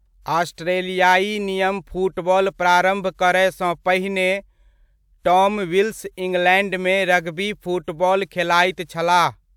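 Nothing in this stretch of speech stands out as a technical fault, so there's no timeline of problems to walk through here.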